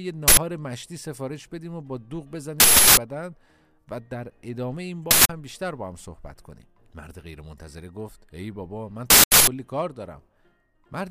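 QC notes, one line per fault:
0.28–0.37 s, 2.60–2.97 s, 5.11–5.29 s, 9.10–9.47 s: uninitialised buffer. Four loud bursts of digital noise, about 93, 372, 186 and 372 ms long. Blocks were played before anything was written to them, so leftover memory came out as samples. The lengths fit 4096-, 16384-, 8192- and 16384-sample blocks.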